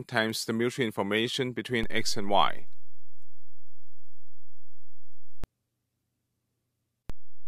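Two DC steps interrupt the audio. At 1.83 s the waveform's zero line jumps by about -23 dBFS, holds there, and snaps back at 5.44 s. A second step of about -24 dBFS arrives at 7.10 s and lasts to the end. Each jump and return is heard as a low thump while the sound itself continues unchanged. This fits an offset input being switched in or a converter recalibrating. On a waveform the trace sits visibly displaced from centre between those times. A spectrogram shows a brief vertical low-frequency smear at each transition.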